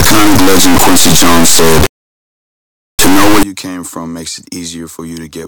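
From 0.0 to 3.43 s, just before "you came from makes", the speech suffers integer read as float, which fits 32-bit integer samples being decoded as 32-bit float. The reinterpreted bit patterns land near zero or far past full scale, so the sound becomes an extremely loud, buzzing square wave.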